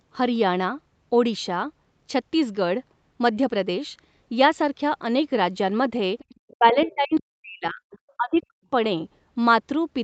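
A speech recording in which the echo canceller likely failed to remove the loudspeaker signal, so the other side's voice is leaking through as faint scraps at 6.19–6.54, 6.74–6.94, 7.18–7.23, 7.91–8.12 and 8.37–8.45 s, roughly 15 to 35 dB below the talker. During the overlap, the canceller likely mistook the talker for echo, producing speech suppressed in double talk: the voice dips by as much as about 40 dB at 6.53–7.82 and 8.17–8.61 s.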